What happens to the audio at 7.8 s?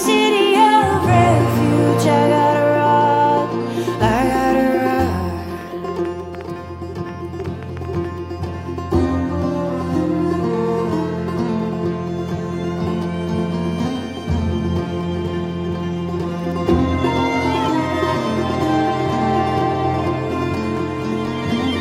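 At 7.8 s a train of clicks is still under way, running from 5.61 to 8.06 s. About fifteen similar pulses arrive at an uneven pace near 4.9 per second, popping out roughly as loud as the sound itself, likely from electrical interference or a faulty connection.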